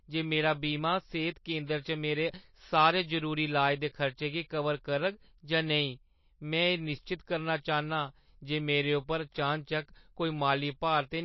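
Throughout the speech the top end is missing, with nothing above about 5.8 kHz, and the damage is plainly audible: the sound takes on a watery, swirling texture, s sounds turn metallic and chirpy, and consonant attacks smear. The likely cause is heavy MP3 compression at a bitrate around 28 kbps. Starved of bits, the encoder cuts the treble at a fixed frequency and zeroes weaker frequency lines, which flicker on and off between frames.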